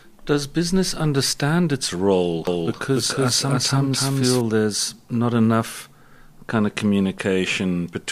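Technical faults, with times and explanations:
2.47 to 4.41 s, doubled audio track: just after "business understand its role", a second full-band copy of the speech runs roughly 300 ms behind at about the same level, dry and cutting in and out abruptly. This likely comes from an edit or a slower capture path mixing the same audio twice.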